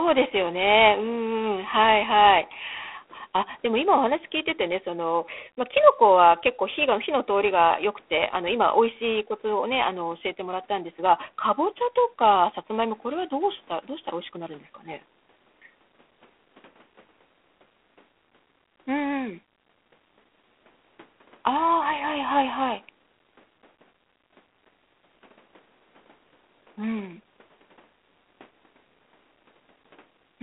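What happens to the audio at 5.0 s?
At 5.0 s, as throughout, G.726 ADPCM: a rasping hiss, fitting 24 kbit/s coarse prediction-error coding, that swells with the speech rather than staying steady, above a telephone band ending near 3.9 kHz.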